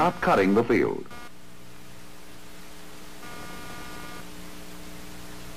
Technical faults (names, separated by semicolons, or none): computer activity noise